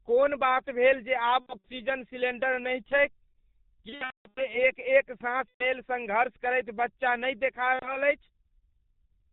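Throughout, the speech carries heavy G.723.1 codec damage. At about 6.3 kbit/s with 30 ms frames, the coder discards everything above 4 kHz and tracks the vocal tract only coarsely. The voice is muffled and hoarse, and consonants smear into each other. VoIP packet loss concealed by the speech codec then breaks in four times. From 1.40 to 1.69 s, between "बात भेल जे आब" and "सिलेंडर नहि छैक", about 150 ms goes missing across a 240 ms stretch. The decoder repeats its last pitch and filter at falling gain, so the sound turns into a fading buzz or coloured noise. The worst event runs from 3.89 to 4.58 s, just before "एक एक साँस". Its gaps total about 390 ms and fit roughly thirteen lost 30 ms frames, the longest run 210 ms, and the voice stays weak or distorted as it recovers. Shorter drops follow at 5.48 to 5.68 s, between "एक एक साँस" and "सङ्घर्ष करैत बच्चा", and at 7.73 to 7.98 s.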